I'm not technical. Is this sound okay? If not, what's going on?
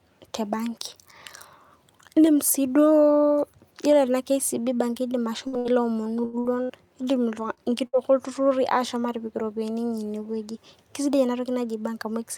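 No. The speech breaks up between about 5.5 and 8 seconds.

There is a burst of packet loss at 5.47, 5.59, 6.39, 6.63 and 7.87 seconds. Each time, about 60 ms of speech never arrived. The last sound is held as a fading buzz or hiss, then the speech jumps ahead.

There is a short stall from a late packet at 6.25 and 7.54 seconds. A piece arrived late, so the sound is stretched for about 86 ms and 29 ms. Nothing is lost, but it drags briefly.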